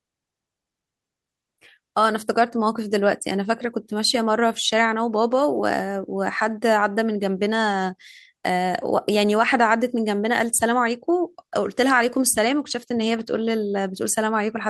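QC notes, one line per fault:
No faults found in this speech recording.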